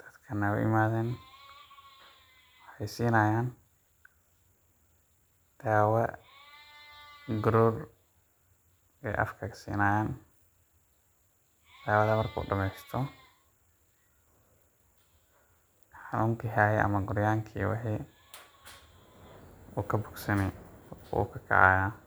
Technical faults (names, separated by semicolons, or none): none